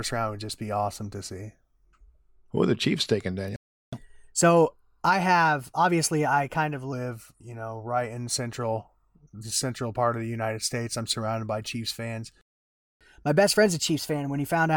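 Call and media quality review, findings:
Playback stall at 3.56 s. Speech drops to silence for 364 ms, then resumes at 3.93 s. Likely buffer underrun or blocked playback thread in the player. Output starves until data or scheduling returns.

Playback stall at 12.41 s. Silence for 595 ms, speech back at 13.01 s. Longer gap than the first. Likely the same underrun or blocked thread in the player.

Catch-up at higher speed, 3.93 to 6.93 s. Speech runs 1.1x fast, pitch raised about a semitone and a half. Player resamples its backlog to regain time lost in the first stall, then drops back to normal rate.

Catch-up at higher speed, 13.01 s to end of clip. Same 1.1x rate and raised pitch after the second stall. Resampler still draining backlog when the audio ends.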